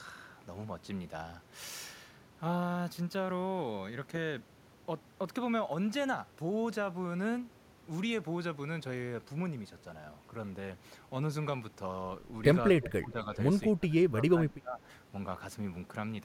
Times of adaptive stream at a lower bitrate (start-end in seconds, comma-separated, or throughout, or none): none